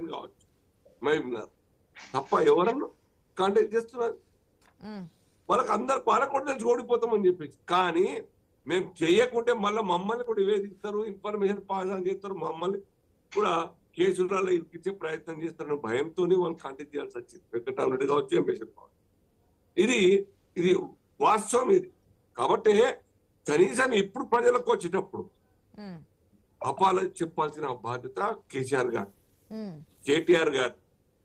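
Nothing here sounds wrong at all; the audio just runs along steadily the whole way without a single glitch or interruption to point out.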